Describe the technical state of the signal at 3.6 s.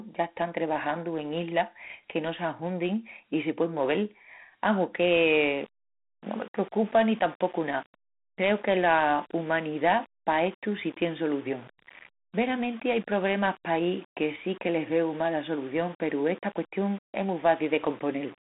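At 3.6 s, as throughout the clip, the speech carries Dialogic VOX ADPCM damage: coarse 4-bit adaptive coding at 32 kbps adds gritty hiss, with a 150 Hz–3.6 kHz band and nothing above 3.8 kHz.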